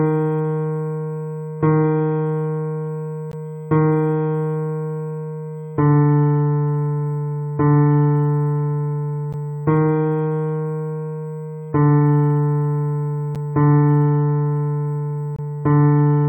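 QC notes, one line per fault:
throughout: USB whine. Current drawn by the USB bus in 125-microsecond microframes leaks into the audio through power or ground, leaving a fixed-pitch whine at 8 kHz with its strongest component at the 16 kHz harmonic, about 45 dB below the signal.
3.32 s, 9.33 s, 13.35 s, 15.36–15.39 s: gap between stream segments. At boundaries of the 2-second segments, the timestamps leave short holes, about 17, 13, 8 and 25 ms long. The player fills them with silence, so the sound drops out briefly with hard edges.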